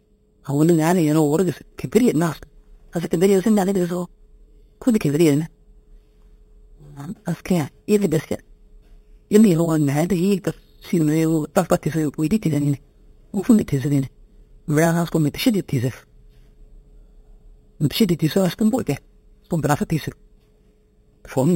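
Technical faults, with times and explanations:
Throughout, imaging from sample-and-hold upsampling: each sample was just repeated with no smoothing, so mirrored copies of the speech spectrum fizz metallically from 4 kHz to 8 kHz, about 20 dB down, tracking loudness, pointing to an 8 kHz original.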